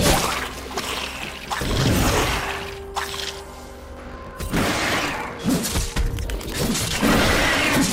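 From 2.30 to 5.38 s there is a block size mismatch (truncated). Each block arrives longer than the next stage reads, so its tail is dropped. A 46.9 Hz buzz results, which fits 1024-sample reads. The sound runs 1.12 times fast, near normal pitch.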